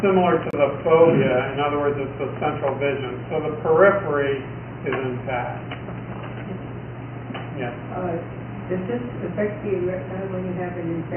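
At 0.51 to 0.53 s there is a gap at a join of encoded pieces. It lasts about 26 ms. Two stretches of audio were encoded separately and then butted together untrimmed. The encoder's start-up delay and the padding on the last frame both remain, so a short hole opens where the sound should run on. The codec blurs its edges. Afterward the audio resumes from where it stopped.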